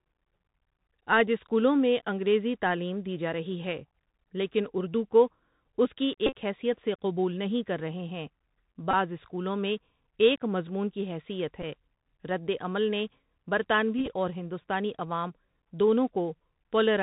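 Throughout, the speech passes through a Bluetooth CVSD headset codec: nothing above 4 kHz survives, s sounds turn scratchy, and granular hiss sits underneath, unlike the smoother band-limiting of wideband codecs. Bluetooth headset packet repeats follow at 6.26 s (after "اردو کو اس کی"), 8.91 s, 11.62 s and 13.98 s, where lost packets were replayed, giving brief buzzes near 267 Hz rather than silent dropouts.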